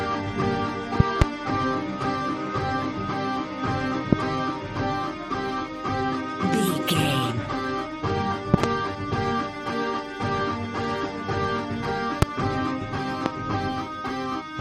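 Loud pops hit at 1.0–1.24 s (two), 4.13–4.15 s, 8.54–8.66 s (two), 12.22–12.25 s and 13.26–13.28 s, around 25 dB above the sound (the last nearer 20 dB). They are likely voltage spikes. The waveform shows tall narrow spikes, and the spectrogram shows thin full-height vertical lines.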